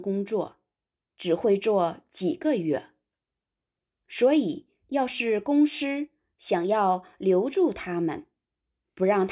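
Listening through the speech recording, nothing stood out as a technical problem at any point.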